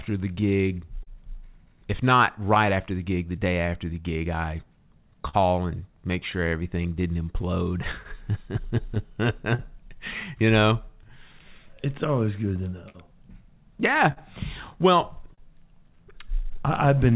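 Clock drift between sender and receiver runs through the whole clip: the sending clock is about 3 percent slow, so timing keeps slipping in one direction rather than wobbling randomly. From 0.1 to 16.9 s come scattered short gaps, about thirty holes of up to roughly 40 ms each, bridged by stretching the last sound into brief smears and ticks, unlike drift's steady slippage. From 0.68 to 17.11 s, repeated timing corrections repeat small pieces, playing at 99% speed and adding around 150 ms in total. This is heard, if at all, as uneven hiccups or a slightly dragging tempo rather than holes, all through G.711 A-law telephone audio with nothing above 4 kHz.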